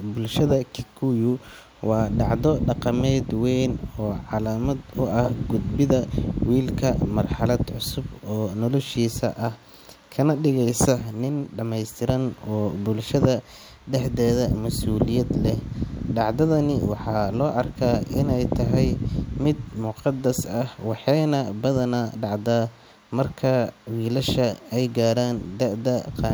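No technical faults are audible at any point in the speech recording.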